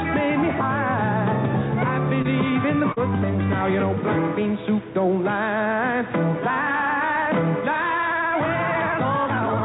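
At 2.22 to 2.26 s and again at 2.92 to 2.98 s, short concealed packet loss leaves a brief smear where roughly 20 ms and then 40 ms never arrived. The receiver extended the preceding sound to fill each gap, so the sound blurs rather than dropping to silence. From 7.95 s to the end, the pace suddenly nearly doubles (about 1.96 times) while pitch holds steady. This rushed quality marks a time-stretched section, likely from duration-fitting software, rather than sped-up playback, which would also raise pitch. Throughout, the narrowband call codec removes everything above 4 kHz.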